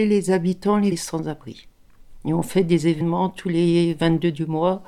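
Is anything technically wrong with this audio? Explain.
Yes. Damaged data in a compressed stream shows up twice: a brief glitch from 0.88 to 0.93 s and a short blip at 3.00 s. Corrupted bytes make the decoder misread those frames, lose sync and hunt for the next valid frame header.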